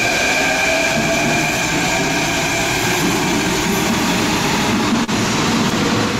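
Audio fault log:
5.04–5.10 s: short concealed packet loss. About 40 ms of audio did not reach the decoder in time, and roughly 36 ms was synthesised by extending the preceding sound before crossfading back, which is heard as a brief smear or wobble in the sound.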